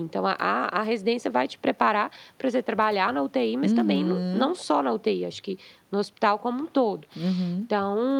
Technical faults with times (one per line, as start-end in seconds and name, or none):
none